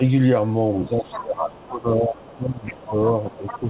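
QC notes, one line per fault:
0.83–3.69 s, speech suppressed in double talk: talker's level sinks by up to about 15 dB, likely echo-canceller ducking during overlap; waveform envelope visibly sags.
0.94–1.18 s, 1.52–1.64 s, 2.16–3.69 s, other side's voice leaking through: a second voice about 15 dB under the talker (around 30 dB down near 1.6 s), likely residual loudspeaker echo; shows as faint, separate harmonic stripes.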